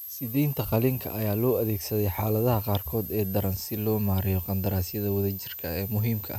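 A switching power supply somewhere in the recording chain is running in an audible burst mode or beating with another supply, and its ripple leaks into the audio as a switching supply whistle. It is present throughout the speech: a thin, high whistle that wanders between about 12.05 and 12.19 kHz as the supply's load shifts. It sits only around 10 dB below the speech.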